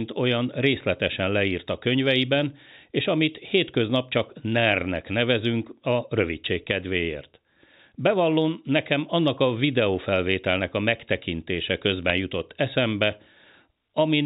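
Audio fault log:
12.03–12.10 s, bit errors on a digital phone line: after "a videófelvételnek a megtekintése", flipped bits in the telephone-band stream corrupt single samples, giving sharp ticks before "jutott eszembe".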